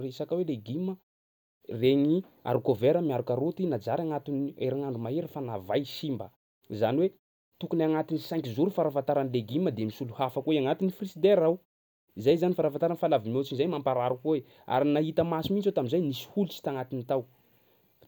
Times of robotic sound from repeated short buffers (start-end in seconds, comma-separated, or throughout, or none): none